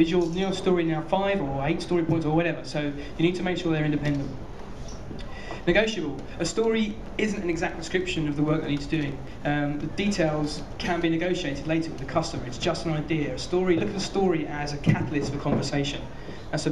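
From 6.91 to 9.28 s, a train of clicks ticks evenly at 6.3 per second, likely from interference, drawing thin vertical spectrogram lines and sharp waveform spikes.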